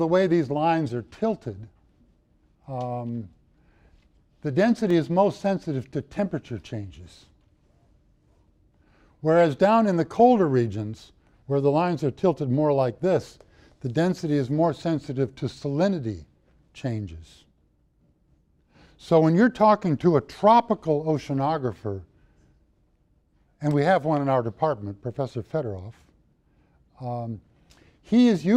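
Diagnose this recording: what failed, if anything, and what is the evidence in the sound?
A single tick at 4.90 s: a block of digital silence about 2.3 ms long, where output stopped and resumed abruptly, from an unfilled playback buffer or invalid computed samples.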